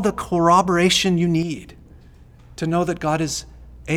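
Right after "corroboration you", from 1.43 to 1.57 s, the speech suddenly drops by about 6 dB for roughly 0.14 s, then snaps back. That's likely one channel drops out: one stereo side vanished briefly, so the mono sum lost half its shared level.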